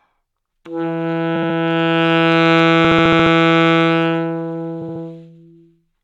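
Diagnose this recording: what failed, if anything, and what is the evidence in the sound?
Repeated frames in the codec stream: a 69.7 ms block replays at 1.35–1.56, 2.84–3.32 and 4.81–5.02 s, stuttering and lengthening the sound.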